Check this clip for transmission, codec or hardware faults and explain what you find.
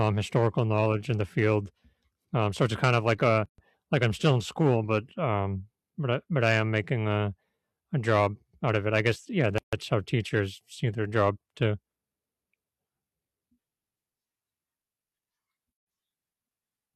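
The speech has one recurring fault: gaps at the joins of encoded pieces, at 3.46–3.58 s (127 ms, after "kind of like a"), 9.58–9.73 s (144 ms, after "it I guess yeah") and 15.73–15.87 s (144 ms). Each segment's encoder delay and last-frame padding were left in, so abrupt silences with smeared edges fall exactly every 6 s, with speech resuming where it stopped. Random packet dropouts would be irregular in timing.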